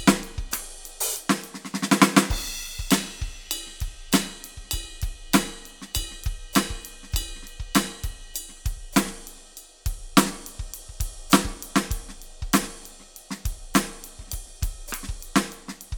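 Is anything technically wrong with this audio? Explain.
No, nothing technically wrong turns up anywhere in this music recording.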